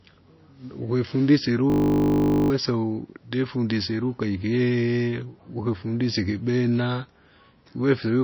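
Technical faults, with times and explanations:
throughout: MP3 compression, likely the cause of the plainly audible watery, swirly texture and smeared attacks. Nothing is present above 5.8 kHz, pointing to a low-bitrate encode around 26 kbps, where weak frequency lines drop in and out between frames and the treble is cut off.
1.7 to 2.5 s: System hang loop. A 20 ms piece of audio repeats exactly about 40 times, heard as a steady buzz at 50 Hz. The system stalled while the audio hardware kept replaying one ring buffer, and about 0.7 s of the speech is lost.
2.92 to 5.36 s: Video or display buzz, with a hum at the 59.94 Hz field rate, hash above it, and a tone at the 15.7 kHz line rate, around 45 dB below the speech. A screen or video cable is coupling its scanning signals into the audio path.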